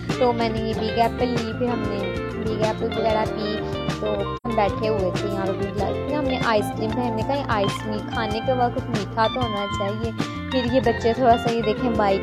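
AAC frame loss with muting hits the audio at 4.36 s: the decoder zeroed the spectrum of the missing data, which fits two lost frames of about 85 ms. The overlapping windows fade it out and back in by 4.47 s, leaving a soft-edged gap.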